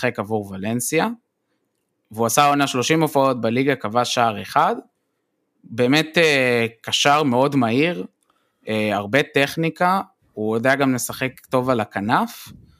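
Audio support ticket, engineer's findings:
No faults found in the speech signal; level, continuity and timing hold steady across the whole recording, with nothing to attribute to any component in the chain.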